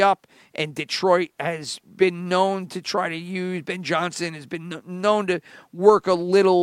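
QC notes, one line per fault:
The speech signal holds a steady level and an unbroken flow throughout, with nothing in the audio that calls for attention.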